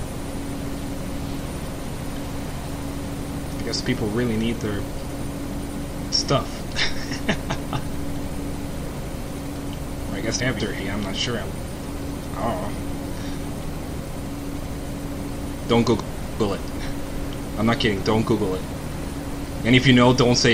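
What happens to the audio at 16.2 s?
At 16.2 s the sound falls inside a span of chunks out of order, running from 16.0 to 16.6 s. The audio there is cut into 200 ms pieces. One piece arrived two chunks late, so it plays after the two pieces that should follow it. Nothing goes missing, but the sequence is scrambled. The result is a brief jumbled moment. There are three hard joins between mismatched pieces across that stretch.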